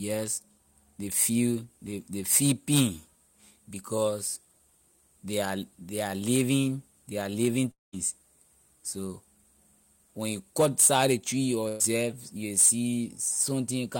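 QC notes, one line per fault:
7.71–7.94 s, long network dropout: the sound stretches into a smeared, droning tail that fades away, leaving near-silence for much of the gap before the audio picks up again further on with about 220 ms of content skipped. This is likely a stretch where no audio reached the receiver, which kept extending the last sound it had for roughly 210 ms while ramping it down, so the tail thins out before playback jumps ahead.
11.68–11.82 s, burst of packet loss: a short held buzz or fading hiss briefly replaces the sound, with no silent stretch, and the audio then carries on having lost about 120 ms. A short run of consecutive packets was lost or arrived too late to play, so the receiver repeated the last sound for about 114 ms, lowering its level as the gap went on, then rejoined the stream past the missing piece.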